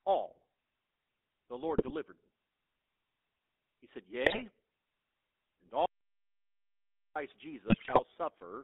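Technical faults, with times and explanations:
Throughout: GSM full-rate codec. The speech is squeezed into a band of roughly 200 Hz to 3.6 kHz. A vocal-tract model driven by sparse pulses replaces the real excitation, which fits a 13 kbps GSM stream. The result is a plainly audible buzzy, gravelly roughness.
1.78–1.93 s, 4.24–4.45 s and 7.68–8.0 s: GSM bit errors. Short bursts of squawks, pops and gargling break into the speech. Corrupted filter, pitch and gain values reach the decoder. Each affected frame comes out with a bent spectrum or a sudden jump in level.
5.86–7.16 s: audio dropout to silence. The speech cuts off and about 1.3 s of complete silence follows, with no room tone at all. The input was likely lost while silence kept being written. Whatever was said in that gap is gone.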